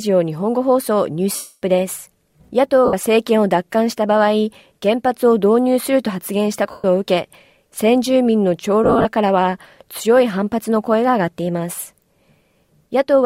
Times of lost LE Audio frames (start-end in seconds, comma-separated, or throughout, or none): 1.35-1.62, 2.85-2.93, 6.71-6.84, 8.84-9.05